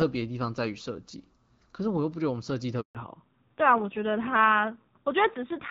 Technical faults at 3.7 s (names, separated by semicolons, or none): fallback to narrowband